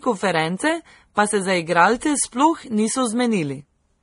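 Throughout, nothing sounds above 10.6 kHz, and two different kinds of codec artefact overlap, unlike a single encode. The likely cause is transcoding between lossy codecs, Vorbis into low-rate MP3.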